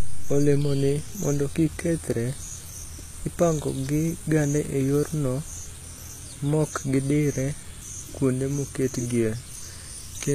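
HE-AAC compression throughout this speech clip: the treble above the codec's crossover is likely rebuilt by copying lower bands upward, so s sounds turn gritty and metallic, nothing reaches past 14.9 kHz, and the damage fits a bitrate near 20 kbps.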